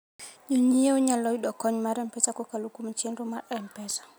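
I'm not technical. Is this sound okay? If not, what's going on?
Yes, this speech recording sounds fine. I can't hear anything going wrong at any point in it.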